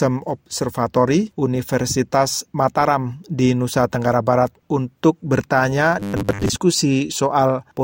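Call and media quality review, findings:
Robotic sound from repeated short buffers, 6.00–6.52 s: fixed 100 Hz buzz, likely starved playout looping 10 ms segments over most audio; fixed-rate, unlike codec warble.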